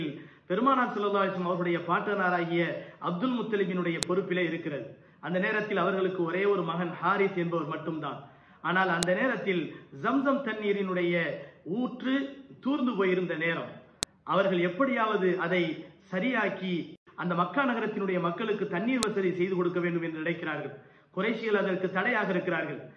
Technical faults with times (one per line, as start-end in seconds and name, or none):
4.03 file header played as audio
9.03 file header played as audio
14.03 file header played as audio
19.03 file header played as audio